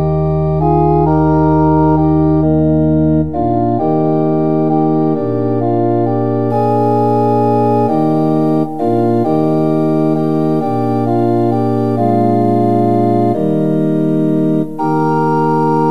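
Pre-emphasis left on from 6.50 s to the end at 15.90 s: the treble boost applied before transmission, matching the 75 µs FM curve, was never undone by its de-emphasis cut. High frequencies stand about 14 dB too strong at 10 kHz relative to 1 kHz, so the audio turns thin, bright and sibilant.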